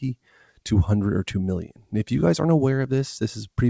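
Throughout the clip, a noise suppressor applied to music or sounds keeps mistaking sustained content for noise. Gain swings by around 5 dB as held material sinks and onsets pass, so the sound pumps and thins. A waveform shows a breathing envelope, and a spectrogram shows sustained bands fading between bright attacks. Everything stops at 8 kHz, consistent with a wideband call codec.

From 0.15 to 0.6 s, sound is cut by the noise suppressor, dropping by up to about 10 dB over roughly 0.3 s in total. From 1.65 to 1.93 s it is cut again, by up to about 12 dB over about 0.2 s. Both dips appear as clear notches in the waveform envelope and as darkened, truncated tails on the spectrogram.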